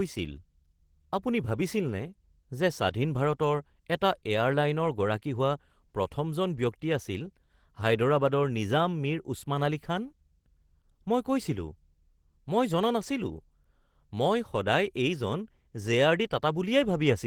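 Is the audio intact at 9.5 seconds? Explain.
No, the Opus voice compression runs through the whole clip, so 9.5 s is affected like everywhere else. It's in hybrid mode: a linear-prediction coder handles the band below 8 kHz and a transform layer covers the top, keeping the full band up to about 20.2 kHz. The damage comes from the excitation being coded coarsely, which fits a bitrate around 16 kbps. You can plainly hear it as a hoarse, slightly robotic edge on the speech.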